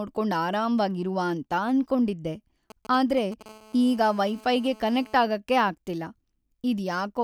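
From 2.70 to 3.43 s, just after "ಅರಾಮ್ವಾಗಿ ಇರುವ ಅಂತ ಅನ್ಕೊಂಡಿದ್ದೆ", GSM signalling bursts appear: a nearby 2G phone's brief radio transmissions are rectified by the audio circuitry, producing a galloping dit-dit-dit of short 217 Hz buzzes roughly 20 dB below the speech.

From 3.46 to 5.17 s, ending just before "ಆಗಕೆ ಆಗ್ತಿಲ್ಲ", a steady GSM phone buzz follows as the phone transmits in regular bursts in call mode. Its 217 Hz burst rate is demodulated into a hard, raspy, harmonic-rich buzz about 25 dB below the speech and unrelated to it.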